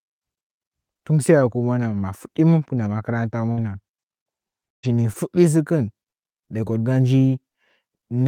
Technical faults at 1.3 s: none

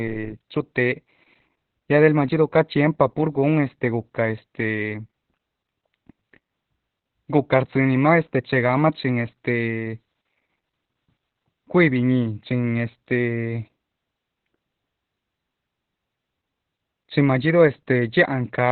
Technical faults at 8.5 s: Opus voice compression

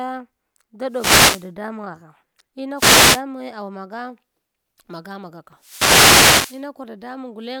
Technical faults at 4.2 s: none

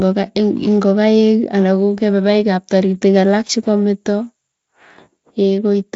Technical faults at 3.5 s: VoIP packet loss concealed by the speech codec

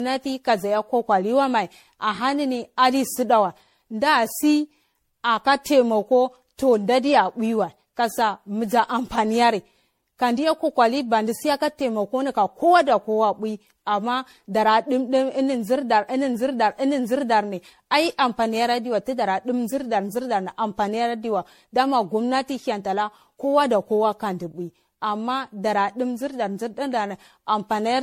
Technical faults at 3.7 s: generation loss

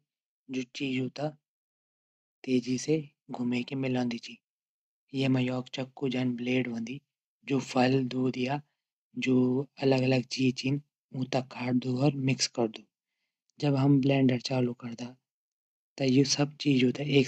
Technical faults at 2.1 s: rebuffering stall

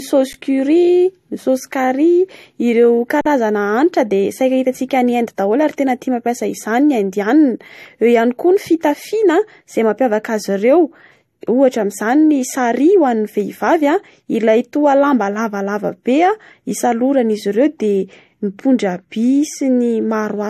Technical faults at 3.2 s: transcoding between lossy codecs; underrun with held sample

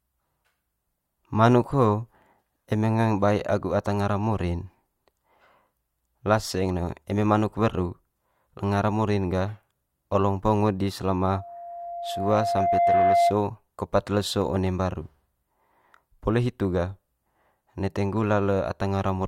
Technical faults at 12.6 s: loudspeaker feedback squeal

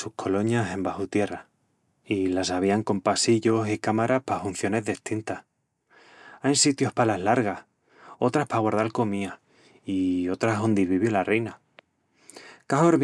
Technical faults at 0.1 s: none

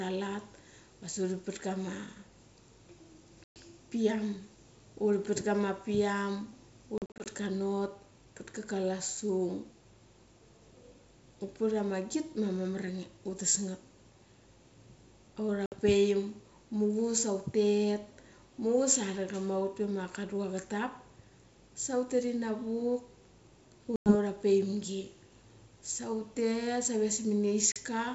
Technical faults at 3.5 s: packet loss on an ADPCM call

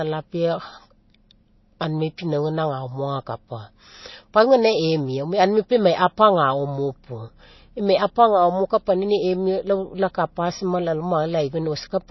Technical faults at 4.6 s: MP3 compression

